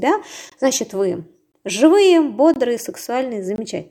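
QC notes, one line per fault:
0.50–0.52 s, 1.52–1.54 s, 2.54–2.56 s, 3.56–3.58 s, gap between chunks: the speech arrives in 1.0 s chunks with about 21 ms of silence inserted at each join. Nothing is lost, but the speech breaks into short holes once a second.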